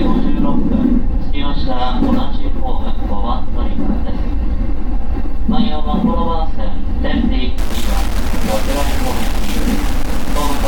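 From 7.58 s to the end, the audio turns grainy with low bit depth without dither, likely from 4-bit rounding, giving distortion only about 15 dB down that tracks the signal. The waveform shows coarse stair-steps, and the spectrogram shows harmonically structured grit rather than a smooth noise floor.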